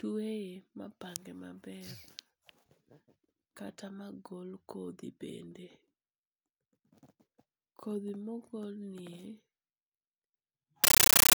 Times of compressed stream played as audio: 10.84-11.36

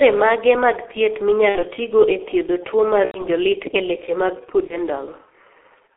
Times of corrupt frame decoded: none

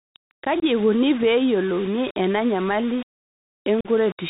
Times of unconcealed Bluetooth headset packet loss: 0.60-0.64, 3.81-3.88

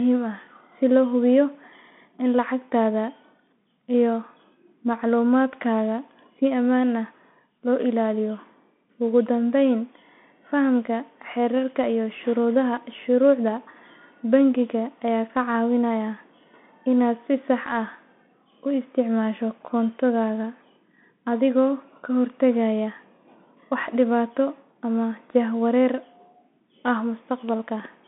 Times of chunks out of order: none

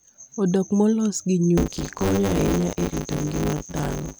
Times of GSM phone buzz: none

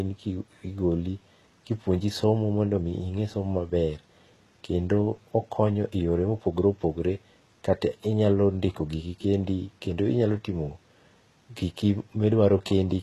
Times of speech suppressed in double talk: none

